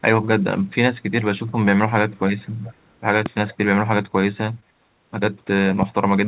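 From 1.47 to 1.51 s, then 2.11 to 2.44 s and 2.63 to 2.89 s, a faint delayed copy of the speech trails behind it. This is echo leak. It arrives about 0.42 s late and grows from barely audible to clearly quiet. A loudspeaker echo canceller at the far end likely failed to remove it.

At 3.26 to 3.28 s a loud pop cracks over the speech, which carries on beneath it. It peaks well above the speech level. A voltage step from a plug, switch or driver glitch is the likely source.

The echo leak returns at 3.50 to 3.56 s, at the same delay and still quiet.

At 4.60 s there is a short concealed packet loss. About 20 ms of audio never arrived. The decoder stretched the preceding sound to cover the gap and blended back. It is heard as a brief smear.

At 5.82 to 5.85 s a second loud pop lands, louder than the first.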